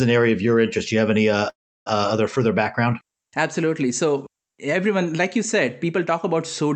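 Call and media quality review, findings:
Call audio freeze, 1.49–1.88 s, after "you have any uh". Last sound briefly carried on, then about 0.32 s of silence. 0.37 s gap inserted, nothing lost, rest of call shifted late by 0.37 s. Likely jitter buffer underrun from delayed packets.

WebRTC call path: Opus coding noise throughout. Spectrum stops at 8 kHz, on an Opus link running around 48 kbps.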